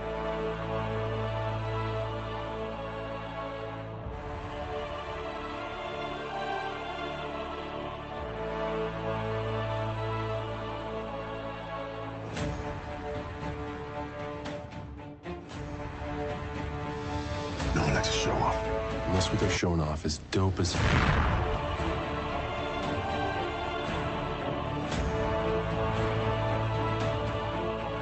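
No faults can be heard.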